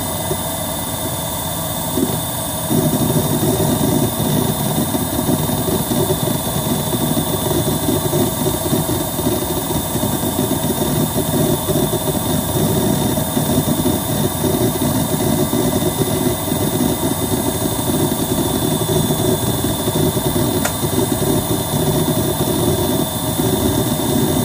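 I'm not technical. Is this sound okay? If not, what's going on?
No, there's a short concealed packet loss at about 2.00–2.04 s. A bit of audio arrived too late, so the receiver patched it by stretching the preceding sound, leaving a quick smear.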